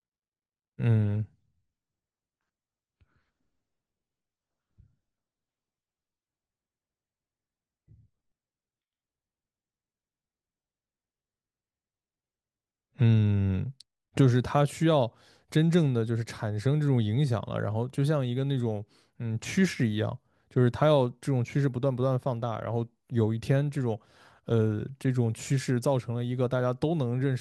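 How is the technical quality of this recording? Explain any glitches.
The recording has one clear quality fault. From 1.02 s to 13.02 s, the adaptive stream plays at a lower bitrate. A slower connection forced a leaner encoding. Codec artefacts rise. Quality switches abruptly, without a gap. It fits AAC dropping from 96 to 32 kbit/s.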